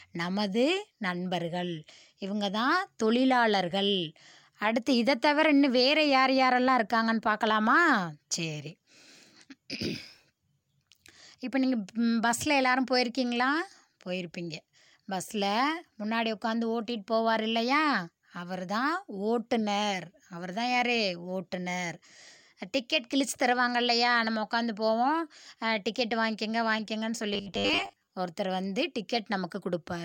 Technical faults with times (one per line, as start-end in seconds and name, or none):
27.33-28.08 robotic sound from repeated short buffers